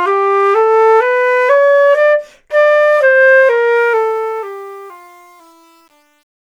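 From 3.76 s there's truncation distortion on the fade: too few bits, which fits an 8-bit stage, and no dither. It goes gritty from 4.36 s.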